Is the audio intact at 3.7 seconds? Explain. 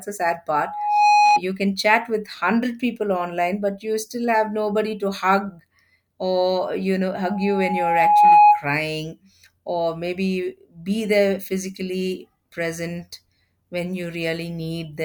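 Yes, the audio at 3.7 seconds is intact, with no dropout, glitch or other fault at that moment.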